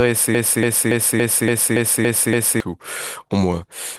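Speech, with a broken-record loop from 0.35 s to 2.60 s: a 0.28 s fragment repeats exactly eight times back to back, and the speech that belonged in that span is lost. The likely cause is a player or stream stall resending its last buffer.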